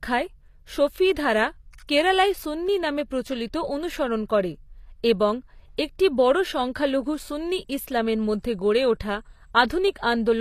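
From start to finish the speech has nothing above about 14.9 kHz and carries a thin, smeared coding haze. It's likely low-bitrate audio saved at a high bitrate: the texture fits something like 24 kbit/s HE-AAC re-encoded as 192 kbit/s MP3, so the damage stayed.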